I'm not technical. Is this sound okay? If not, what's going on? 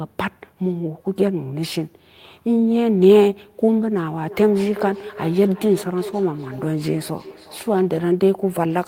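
No. From about 4.2 to 7.9 seconds there is feedback echo between two devices: a second device in the room replays the call, and the microphone picks it up again. The speech returns roughly every 0.4 seconds, quieter than the original and thinner.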